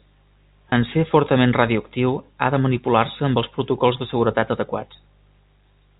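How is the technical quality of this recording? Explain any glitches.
Two brief glitches mar the speech, at 0.70 to 0.72 s and at 4.40 to 4.42 s. Each sounds like a tiny held, slightly buzzy hitch. This is packet loss with pitch repetition: a 20 ms stretch of audio, which fits a single lost packet, went missing, and the receiver filled it by repeating the last pitch period, so the sound briefly freezes rather than dropping out. The whole clip also carries G.711 telephone coding, with nothing above 4 kHz.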